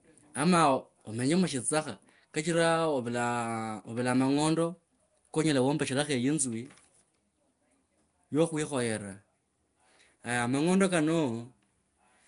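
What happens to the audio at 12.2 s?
At 12.2 s the speech is still carrying the Nellymoser compression that runs through the whole clip, likely from Flash's Nellymoser Asao codec, which fits roughly 44 kbps. Starved bands are filled with noise, giving a rough, hissy, underwater smear, with nothing above 10.6 kHz.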